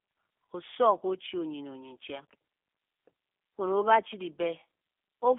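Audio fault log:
Throughout, G.729 codec: speech held to roughly 250 Hz–3.5 kHz with a rough, synthetic buzz, fitting an 8 kbit/s pulse-excited coder rather than plain telephone filtering.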